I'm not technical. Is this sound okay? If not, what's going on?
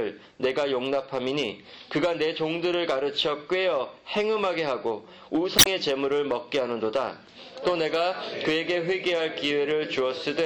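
No. At about 5.55 seconds there's a short chirp or squawk lasting roughly a tenth of a second, until 5.67 s. That's damaged data in a compressed stream: part of the file was corrupted, so the player misread that bit and had to find its place again.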